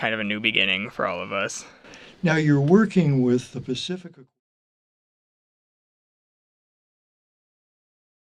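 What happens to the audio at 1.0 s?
Nothing goes wrong at 1.0 s; the audio there is intact, with no dropout, click or other fault.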